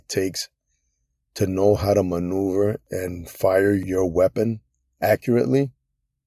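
No technical faults are audible.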